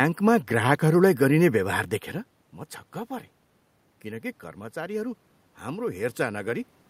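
Automatic gain rising runs from 4.02 to 6.73 s. The level reaching the microphone drops by about 11 dB, so the gain control judges the input too quiet and turns itself up by about 5 dB, gradually, over almost three seconds. The boost lifts everything the microphone picks up, so the room noise climbs with the voice and the background audibly swells beneath the speech. The level change near 2 s comes from the talker's distance to the microphone changing.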